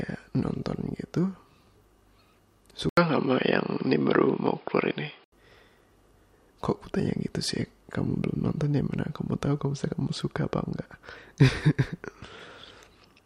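From 2.89 to 5.32 s, likely an input switched to a poorer device: an 80 ms waveform gap, then dull sound, spectrogram empty above 5.2 kHz.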